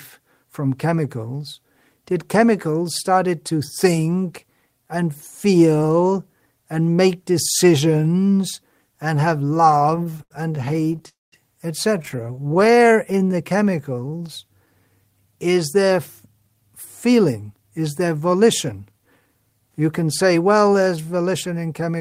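Right after "make decisions and have", from 9.71 to 11.07 s, the speech goes through repeated stalls (stutter). The jitter buffer ran dry 27 times, and each gap was bridged by extending the last sound, 353 ms in all and up to 76 ms at once. About a quarter of that span is concealment, so the speech drags and catches.

From 11.09 to 11.34 s comes a call audio freeze. The sound holds and then drops into near-silence for about 190 ms before resuming where it stopped, which adds a 235 ms pause. Nothing is lost. The likely cause is packets held up in transit until the buffer emptied.

A second stutter runs from 12.02 to 12.92 s. Here 22 shorter gaps of at most 16 ms add 207 ms, about 23% of the span, and the result is a choppy, halting texture.

Overlapping it, from 12.58 to 14.24 s, a jitter buffer slow-down rebuilds reserve by repeating pitch periods. This adds 191 ms, so the speech plays at 89% speed at unchanged pitch, with drawn-out sounds.

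After "is there", from 16.33 to 19.29 s, a jitter buffer speed-up trims short pitch-period pieces totalling about 0.3 s to cut excess delay. The speech runs at 109% speed at the same pitch and sounds hurried.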